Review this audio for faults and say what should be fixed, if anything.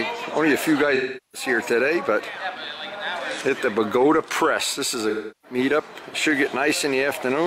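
AAC frame loss with concealment occurs twice: from 0.95 to 1.49 s, with roughly 384 ms of coded audio missing, which fits about nine lost frames, and from 5.09 to 5.58 s, about 341 ms, consistent with eight frames. Each time the decoder rebuilt the gap from the last good spectrum before normal audio resumes. Adding forward error correction or retransmission on the transport would prevent these gaps.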